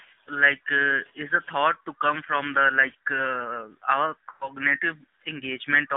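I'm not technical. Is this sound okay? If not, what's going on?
No. The whole recording has been squeezed through the AMR narrowband mobile codec, the old phone-call format. Everything above about 3.6 kHz is gone, so the voice sounds thin and muffled. It also has a buzzy, artificial edge, as on a poor mobile call.

There are also lost AMR speech frames from about 4.32 to 4.53 seconds. Radio errors corrupted a short stretch of the call. The decoder filled the gap by repeating the last sound it had and fading it out. That makes the voice smear and drop away briefly before it returns.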